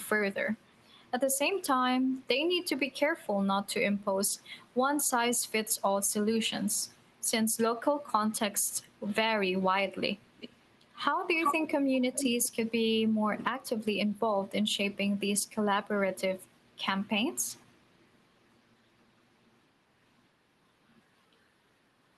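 An echo leak appears from 0.03 to 1.38 s as a faint copy trailing about 0.42 s behind the speech. From 10.17 to 14.74 s it returns much louder, lagging about 0.38 s, and then again faintly at 16.44–16.83 s and 17.59–18.28 s. The likely cause is a far-end loudspeaker feeding its microphone past an incomplete echo canceller. Unlike room reverberation, which smears continuously, this is a discrete repeat at a fixed delay.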